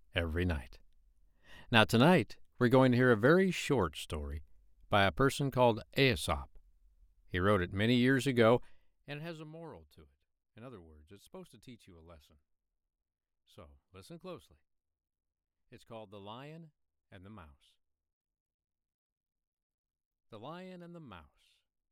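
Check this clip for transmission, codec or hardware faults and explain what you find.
One fault is present, zipper noise. From 8.52 to 9.56 s, between "wrote it many years" and "to it", the gain is lowered in unsmoothed 1 dB jumps, around thirty a second, for a drop of roughly 20 dB. Each jump clicks, so a fast ticking zip rides on the speech as it fades.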